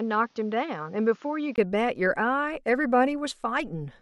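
From the start to 1.58 s the sound is dull and boxy, with nothing above 7 kHz, a few decibels quieter than what follows, and a faint background noise sitting well below the signal. At 1.58 s a brief gap of about 20 ms breaks the audio, and the full, brighter tone returns. This most likely reflects an input switched to a poorer device, a narrower-band microphone with its own noise and gain, before the recording moved to the better input.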